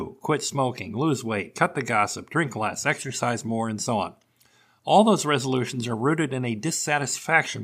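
Resampler restarted on every block, from 5.22 s to the end: each 20 ms block was converted separately, leaving edge errors heard as a 50 Hz buzz under the speech.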